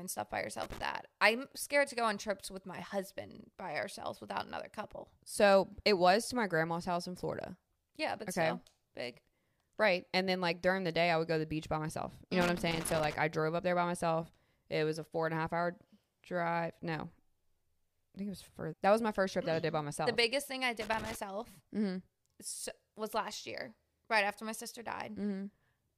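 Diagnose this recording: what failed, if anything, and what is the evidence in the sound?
A loose connector crackle in the analogue wiring: a worn or dirty contact kept making and breaking as it moved, chopping the signal. Irregular scratchy bursts sit at 0.63 to 0.82 s, 12.41 to 13.14 s just before "I drove up there", and 20.81 to 21.15 s right after "biggest thing I".

At the network or playback stage, a stream segment was likely skipped: a segment failed to load and the player moved on to the next one. The sound jumps ahead abruptly at 18.72 s, between "I think it was" and "that was my first", with a small blip at the join.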